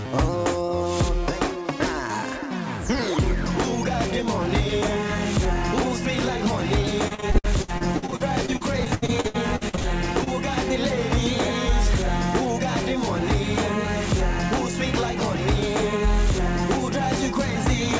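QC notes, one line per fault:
7.08–9.86 s, repeated packet loss (robotic sound): about two dozen holes, the longest 74 ms, are patched by extending the preceding sound, so roughly 30% of this stretch is synthetic and sounds choppy with pieces missing. A spectrogram shows smeared, overly regular harmonic blocks, with ragged seams in the waveform.
10.24 s, short concealed packet loss: about 20 ms never arrived and was bridged by continuing the last sound, then blended back into the real audio, giving a brief smear or wobble. A spectrogram shows a short stretched patch, and the waveform shows a subtle seam.
15.93–17.91 s, periodic USB or driver dropouts: about three tiny skips, each around 2 ms and spaced almost exactly 1 s apart, where audio is cut out rather than filled, heard as regular ticks. The waveform shows sharp discontinuities, and each tick appears as a thin vertical broadband line up to the 8 kHz ceiling of this G.722 call path.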